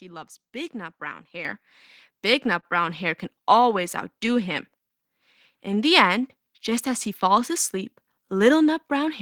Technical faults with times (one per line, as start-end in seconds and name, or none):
0.00-9.21 clock drift between sender and receiver
1.45 microphone volume stepped up
2.60-2.65 short stall from a late packet
4.46-8.88 repeated timing corrections